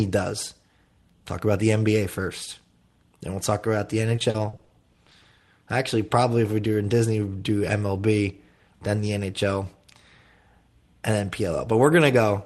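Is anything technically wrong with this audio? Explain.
Yes. From 4.16 to 5.25 s, after "we'll talk about the", there is repeated packet loss. Lost packets were patched by stretching prior sound. Gaps up to 40 ms make it choppy and robotic.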